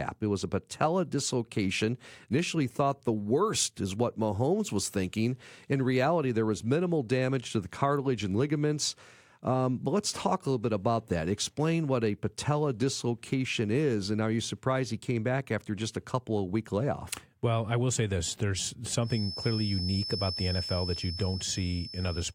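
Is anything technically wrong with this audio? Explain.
Yes. From 19.00 s to the end of the clip a feedback whistle sits behind the speech: a thin, steady tone at 5.3 kHz, roughly 10 dB below the speech, swelling and fading slowly in level. The likely cause is a loudspeaker-to-microphone loop running just at the edge of feedback, so that one frequency keeps recirculating and sustaining itself without building up into a full howl.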